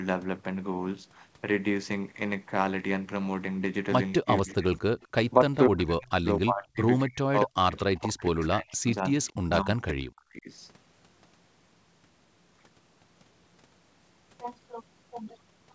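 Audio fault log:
4.20–4.87 s and 5.40–10.49 s: speech suppressed in double talk. The voice dips by roughly 35–40 dB or drops out in pieces, about 0.3 s then 3 s in total, likely from the echo canceller ducking during overlapping talk.
4.37–5.08 s and 8.86–9.32 s: echo leak. A faint delayed copy of the voice, 241 ms late and about 30 dB down, likely from loudspeaker pickup the canceller did not fully remove.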